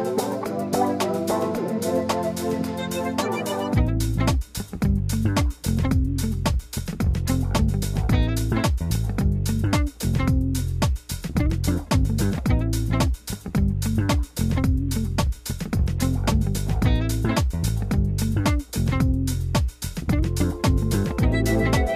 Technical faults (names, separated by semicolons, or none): none